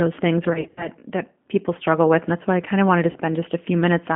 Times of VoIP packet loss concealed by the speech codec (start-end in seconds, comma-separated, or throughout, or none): 0.49-0.88, 3.11-3.16